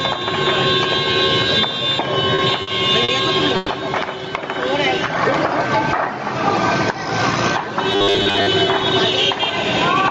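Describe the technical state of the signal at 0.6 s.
At 0.6 s the sound is caught in gain pumping that runs through the whole clip. The gain swings by around 15 dB, so levels sit squashed together. The likely cause is input gain set far too high, with a fast limiter clamping every peak. Unlike a noise gate, the background is never cut to silence.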